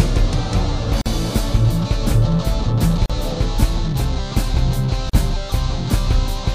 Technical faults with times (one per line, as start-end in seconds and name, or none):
1.01-1.06 gap at a join of encoded pieces
3.06-3.10 gap at a join of encoded pieces
5.10-5.13 gap at a join of encoded pieces